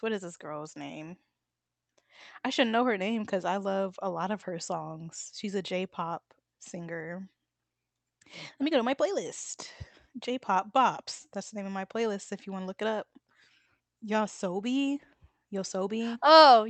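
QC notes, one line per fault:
No faults are audible in this speech recording. The WebRTC call path carrying it is heard as an upper limit to the audio at 8 kHz, in line with an Opus link at around 32 kbps.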